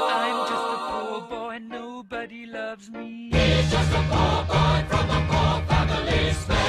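Nothing technically wrong can be heard in this audio. There are no faults to place in time or trace to a cause.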